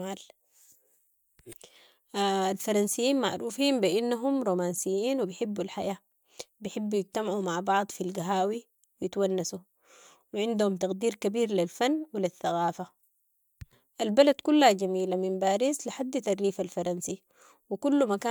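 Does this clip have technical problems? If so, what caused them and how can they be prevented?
No, there are no technical problems in this clip. Nothing has gone wrong, so there is nothing here to prevent.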